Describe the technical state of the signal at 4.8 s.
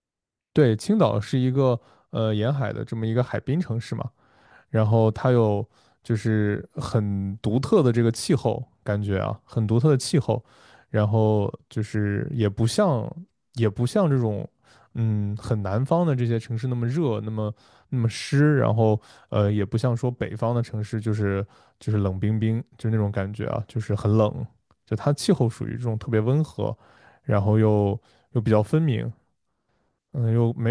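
At 4.8 s the signal is intact, with no audible fault at that point in the speech.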